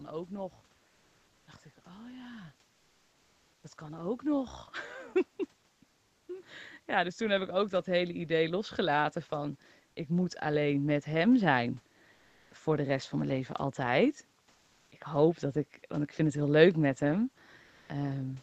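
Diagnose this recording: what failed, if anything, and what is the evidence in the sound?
Comfort noise in place of the background, codec stage: at 0.87–1.47, 5.87–6.27, 12.13–12.51, 14.51–14.91 and 17.63–17.89 s, room noise turns into steady, featureless hiss. On a spectrogram this shows as smooth, uniform bands. The likely cause is Opus discontinuous transmission synthesising the pauses.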